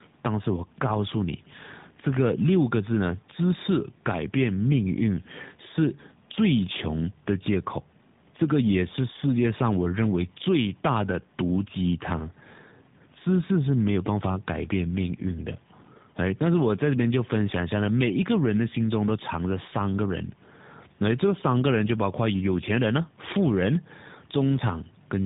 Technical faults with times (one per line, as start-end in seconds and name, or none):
0.00-25.25 tandem speech coding